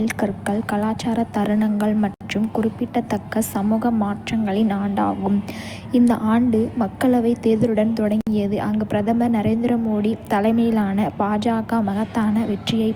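At 2.14–2.21 s, between "கலாச்சார தருணங்கள்" and "குறிப்பிடத்தக்க சமூக மாற்றங்களின் ஆண்டாகும்", and again at 8.21–8.27 s before "அங்கு பிரதமர் நரேந்திர மோடி", the speech drops out for about 66 ms and 60 ms. Each is a gap at a join of encoded pieces, recurring every 6.0 s. Separately encoded segments were spliced without trimming, so each encoder's start-up delay and end-of-frame padding remain. The result is a brief silence with its edges smeared by the codec, after which speech resumes exactly where it stopped.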